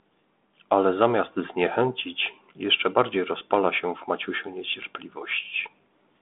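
Nothing goes wrong in this speech at any point; it simply carries the narrow 200 Hz to 3.6 kHz telephone band and light coding grain you'd expect from G.726 ADPCM running at 32 kbit/s.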